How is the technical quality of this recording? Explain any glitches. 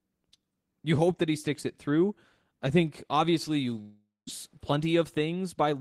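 The recording has one clear glitch. From 3.81 to 4.29 s, a long network dropout likely cuts the speech. A fading buzz fills in, then silence, then speech resumes with that stretch lost.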